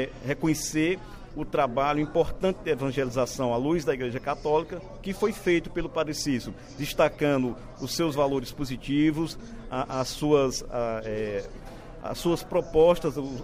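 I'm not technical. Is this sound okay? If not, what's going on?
Yes, it's fine; nothing here points to a technical problem.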